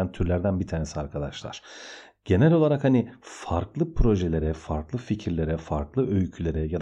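Nothing in this speech recording trips any alarms, so there's no fault to walk through here.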